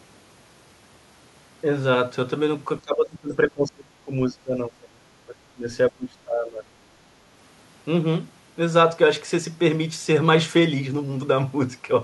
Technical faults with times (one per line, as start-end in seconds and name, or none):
2.81-6.71 speech suppressed in double talk